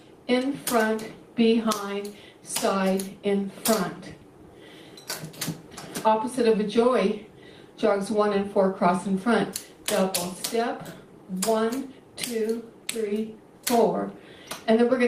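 No technical faults can be heard anywhere in the audio.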